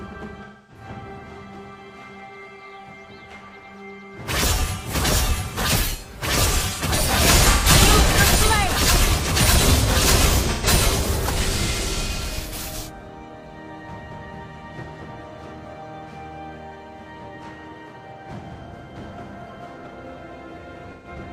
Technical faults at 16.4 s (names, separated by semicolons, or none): none